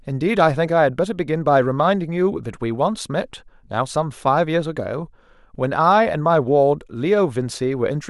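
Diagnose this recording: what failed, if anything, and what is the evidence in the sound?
Nothing failed: no stage in the chain, from capture through to playback, leaves an audible defect anywhere in this speech recording.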